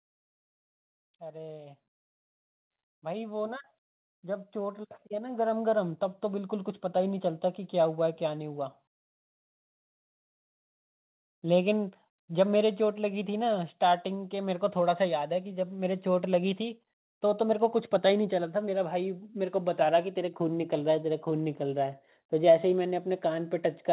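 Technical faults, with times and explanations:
3.0 to 8.7 s, automatic gain rising: the level climbs steadily by about 12 dB over nearly six seconds, with the speech and the background noise swelling together rather than the speech alone getting louder. The gain control judged the incoming signal too quiet and raised its amplification slowly, so everything it passes, including the noise floor, is lifted at the same rate. This all happens inside a telephone-style band that stops at about 4 kHz.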